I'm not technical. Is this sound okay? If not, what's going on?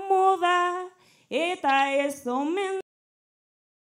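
No, it isn't. The sound has a cut-off end: at 2.81 s it stops abruptly in the middle of what it was doing, with no natural fade or tail. The final stretch of audio was never written out or played back, so instead of trailing off, the sound drops straight to dead digital silence, which lasts from 2.81 s to the end of the clip.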